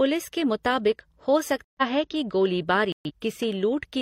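At 1.65 s and again at 2.92 s, corrupt frame muted: damaged compressed frames were rejected and replaced by silence, leaving abrupt holes of about 0.17 s and 0.19 s, visible as sharp-edged blank gaps in waveform and spectrogram.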